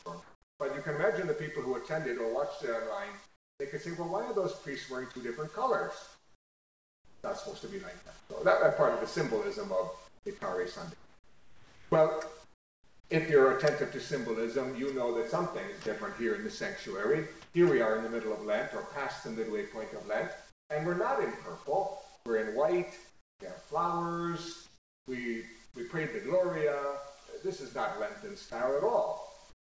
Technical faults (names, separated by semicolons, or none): channel delay (comb filtering); sound chopped by the voice detector; comfort noise in place of the background